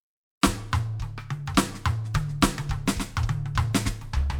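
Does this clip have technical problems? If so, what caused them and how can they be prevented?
No, this music has no technical problems to address.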